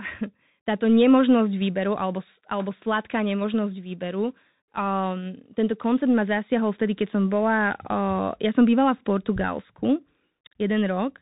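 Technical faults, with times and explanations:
Throughout: Bluetooth CVSD headset codec. The speech is cut off above about 3.8 kHz, and each sample is coded as a single up-or-down step, consistent with a 64 kbps link. Sharp, loud sounds outrun the step, so s sounds turn scratchy over a grainy hiss, unlike a clean band-limit.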